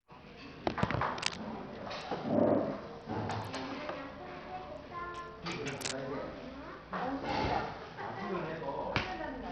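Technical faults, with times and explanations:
Throughout, Bluetooth SBC compression: the treble thins out and flickers, with a gritty noise and aliasing riding on the sound. This is likely a heavily starved SBC link, consistent with about 64 kbps, where the top sub-bands get almost no bits and the rest are coarsely quantised.
1.18–1.36 s and 5.77–5.94 s, cable scratch noise: two brief bursts of dense, uneven scratching, each roughly as loud as the sound itself. The likely cause is a worn cable or connector being moved, making its contact resistance jump rapidly and inject rough noise.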